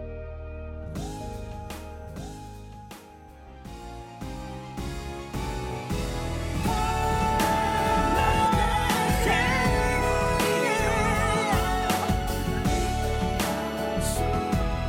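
A doubled audio track runs from 1.21 to 8.47 s: a second copy, around a second late and roughly 5 dB quieter, likely from a slower capture path.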